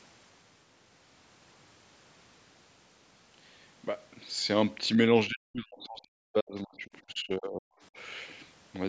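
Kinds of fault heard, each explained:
Speech suppressed in double talk: the speech falls away very deeply, close to silence, from 5.28 to 6.87 s and again from 7.04 to 7.73 s, likely an echo canceller turning down overlapping talk it could not separate from loudspeaker echo.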